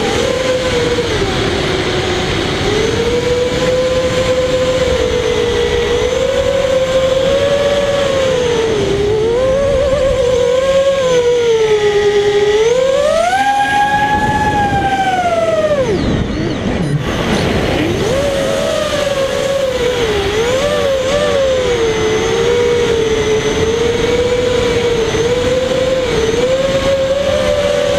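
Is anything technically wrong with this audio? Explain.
Yes. From 16.95 to 21.09 s there is digital radio blending to analogue: the receiver lost its digital stream and cross-faded over 138 ms to the FM broadcast, then back. Hiss rises to roughly 30 dB below the sound and level drops about 1 dB. Smooth fades rather than abrupt silence set it apart from a dropout.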